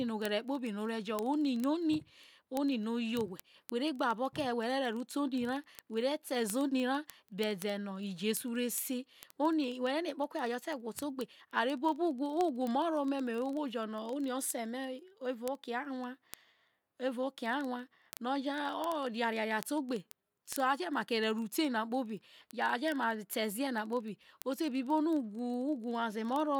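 Speech with word clock ticks from 0.10 to 26.59 s: single-sample slips roughly every 40 ms from an unlocked receiver clock about 500 ppm off, far more regular than random clicks.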